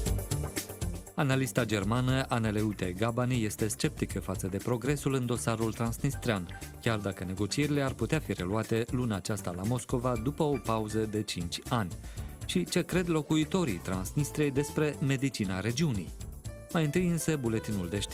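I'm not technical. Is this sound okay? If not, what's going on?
Yes, nothing wrong here.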